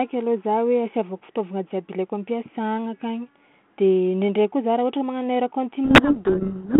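From 5.85 s until the clip ends, a codec payload misread takes over. The decoder reads the G.726 code words in the wrong bit order. The speech drowns in harsh distortion.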